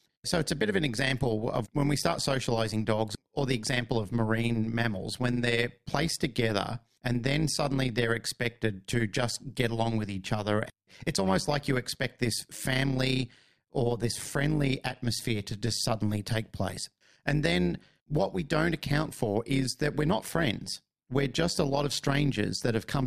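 From start to finish the speech carries a rapid, buzzy flutter, a rough robotic tremolo riding on every syllable, with the level pulsing up and down by about 11 dB at a rate of around 100 times a second. This is overlap-add ripple: the audio was split into windowed frames and reassembled with an overlap whose windows do not add up to a steady gain, so loudness dips and swells once per frame.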